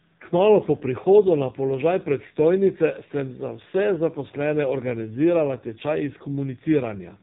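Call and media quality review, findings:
Speech buzzy, synthetic, thin throughout, nothing above 3.8 kHz. Probable component: AMR narrowband mobile codec (AMR-NB), heavy damage, consistent with a low mode near 5.9 kbps. Vocal-tract model driven by sparse pulses per 5 ms subframe loses natural excitation. 8 kHz sampling cuts all upper band.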